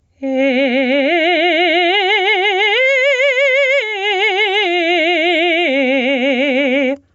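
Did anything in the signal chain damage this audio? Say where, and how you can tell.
Yes. The damage is gain pumping, and it runs through the whole music clip. The level swings by roughly 20 dB. Loud and soft passages end up squeezed together. The cause is most likely input gain set far too high for the microphone, which drives a fast limiter or compressor into clamping down on every peak. The call path limits the audio to below 8 kHz, which is normal for this route.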